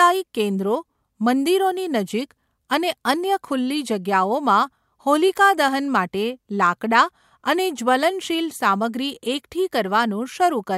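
Speech recording, no technical faults detected on listening.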